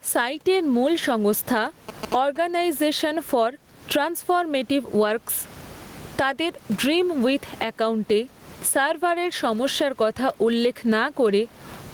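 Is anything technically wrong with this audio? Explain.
Yes, there are two problems.

Gain pumping runs through the whole speech clip. The room noise sits about 36 dB below the speech, and the level moves by around 20 dB. The likely cause is gain set far too high for the mic, with a fast limiter or compressor clamping down on every loud syllable. That pulls loud and quiet parts together, so the speech sounds squashed.

GSM signalling bursts show up from 1.56 to 2.38 s. You get that galloping dit-dit-dit of short buzzes at about 217 Hz, roughly 20 dB below the speech. A 2G phone nearby is signalling, sending short groups of radio bursts without an active call. Something in the audio chain rectifies that RF, and the burst timing becomes an audible buzz riding on top of the recording.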